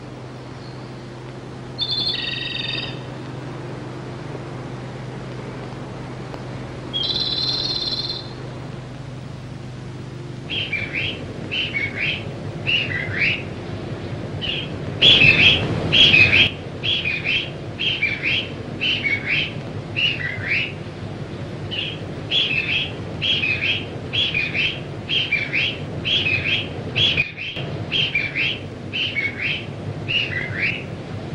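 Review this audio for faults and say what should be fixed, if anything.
Two sudden gain jumps: the level steps up about 7 dB at 15.02–16.47 s and down about 11 dB at 27.22–27.56 s, with the background noise shifting instantly alongside. Unlike compressor pumping, there is no attack or release curve, likely an unramped digital gain change. Apply gain changes with a short ramp.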